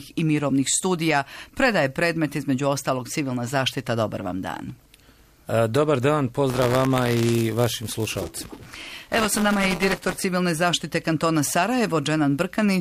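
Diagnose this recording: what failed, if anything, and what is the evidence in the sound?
Buffer tearing at the driver/buffer stage, 6.50 to 10.25 s: a 200 Hz signal-dependent rattle. Each period splices in a small slice of audio about 15 ms stale, unlike isolated dropout clicks.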